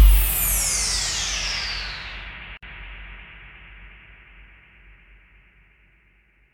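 At 2.57 s the sound drops out, returning at 2.63 s. The break lasts about 54 ms. It is a gap at a join of encoded pieces. The audio was encoded in separate parts and spliced without trimming. Each encoder pass adds silent delay at its start. It also pads the last frame of the part before. Both remain at the join. The codec blurs the gap's edges. Then the sound carries on where it stopped.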